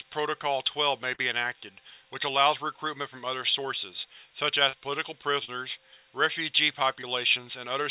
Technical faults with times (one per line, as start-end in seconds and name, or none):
1.14-1.20 short concealed packet loss
4.69-4.75 short concealed packet loss
5.45-5.50 short concealed packet loss
7.01-7.05 short concealed packet loss